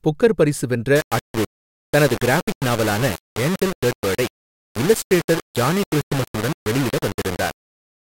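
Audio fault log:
0.96–8.05 s, low bit depth without dither: after "புக்கர் பரிசு வென்ற" the speech turns grainy, noise roughly 10 dB below signal, likely 4-bit rounding; waveform shows stair-stepped levels, spectrogram broadband grit tracking syllables.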